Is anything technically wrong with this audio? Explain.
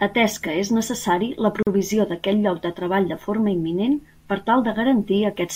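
Yes. There is a gap at a join of encoded pieces from 1.63 to 1.67 s. The speech stops dead for about 42 ms, then resumes where it left off. Each piece carries encoder start delay and end padding, which leave silence at the seam. The edges are smeared.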